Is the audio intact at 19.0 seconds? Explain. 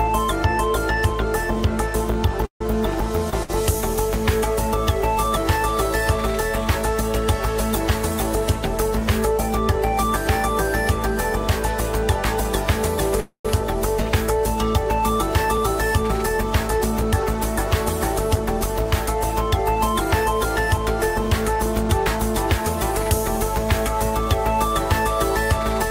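Yes, the audio at 19.0 seconds is intact, with no dropout, click, distortion or other fault audible there.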